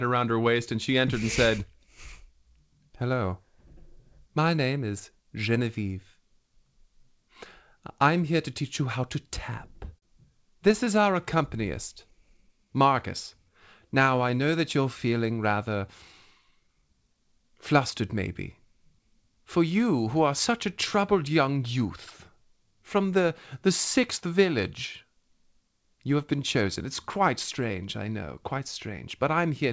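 A sound in this speech recording hangs on for a moment at 9.98 to 10.04 s, held slightly too long with a faint buzz or dip. This is a short stall from a late packet: the jitter buffer ran dry, and the receiver stretched the last sound by 38 ms until the packet turned up, then carried on with nothing lost, leaving the playout delay 38 ms longer. From 10.95 to 14.51 s the talking drags, running at 95% speed with unchanged pitch and a drawn-out quality. That is a jitter buffer slow-down: to rebuild its reserve, the receiver repeated single pitch periods and slivers of pauses over and over, adding 178 ms in total. Within that stretch, between 12.03 and 12.62 s, come about four tiny ticks or smears, each roughly 10 ms at most. These are scattered short gaps, where individual late packets were covered by continuing the preceding sound, about 30 ms concealed in all with nothing actually missing. 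Then from 16.42 to 19.00 s the delivery sounds rushed, at 106% speed with the pitch held steady. This jitter buffer speed-up happened because the buffer had built up more audio than its target, so the receiver trimmed short pitch-period pieces repeatedly, removing about 150 ms. The audio has no content above 8 kHz throughout, which points to a wideband call codec such as G.722 at 64 kbps on the call path.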